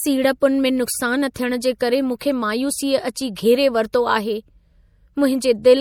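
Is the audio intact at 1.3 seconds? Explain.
No. At 1.3 seconds the speech carries plainly audible MP3 compression damage, present throughout the clip. The likely cause is lossy MP3 encoding at a low bitrate, and the sound fits roughly 64 kbps. With so few bits, the encoder cuts the treble above a fixed frequency. It also drops quiet frequency lines that flicker on and off between frames. The result is a watery, swirly texture. S sounds turn metallic and chirpy, and sharp onsets smear.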